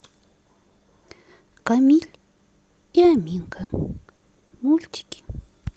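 At 3.63 to 3.71 s and again at 4.15 to 4.23 s, a burst of packet loss interrupts the speech: a run of packets failed to arrive in time, leaving a gap of about 60 ms each time. The receiver covered each hole by extending the last stretch of audio and letting it fade, so the speech briefly turns into a held, decaying tone or hiss before picking up again, with the 60 ms in between simply gone.

Shortly after, two instances of short concealed packet loss follow close together, at 4.39 to 4.43 s and 4.47 to 4.53 s, lasting 20 ms and 40 ms. Here only a sliver of the stream was late, and the decoder bridged it by continuing the preceding sound and blending back into the real signal. Each is heard as a quick smear or wobble in the speech, carried over a band-limited call sound that points to Opus at around 32 kbps, cut off near 8 kHz.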